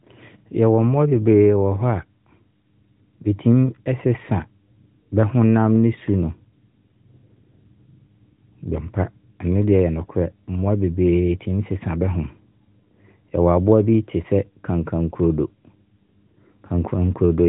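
The speech carries no technical fault; it has come through an AMR narrowband mobile codec that leaves nothing above about 3.8 kHz and only a light coding texture, which fits the codec's higher 12.2 kbps mode.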